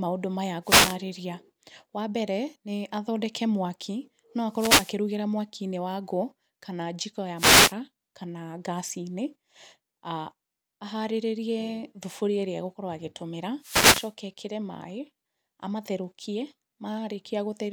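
At 0.63 to 0.99 s, 4.50 to 4.97 s, 7.36 to 7.74 s and 13.60 to 14.13 s, there is a wireless microphone noise hit, a short swish of static lasting about a third to half a second. Each comes from the analogue FM radio link fading as reflected signals cancel, letting receiver hiss rise over the voice. Unlike a digital dropout, the sound is covered by noise rather than falling silent.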